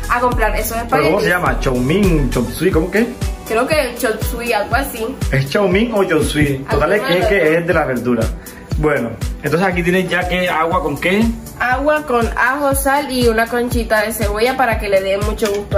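At 7.12 to 7.14 s and again at 8.70 to 8.72 s, a corrupt frame was decoded: damaged bits were played anyway, putting energy at wrong frequencies. The first spans a couple of frames and is loud; the second, a single frame, is much fainter. Unlike a dropout's silent gap or a click's instant tick, each is a brief burst lasting about as long as its damaged frames.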